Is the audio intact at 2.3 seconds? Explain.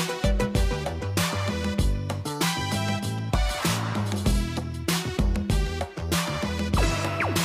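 Yes, at 2.3 seconds the audio is intact, with no dropout, click, distortion or other fault to be heard at that point.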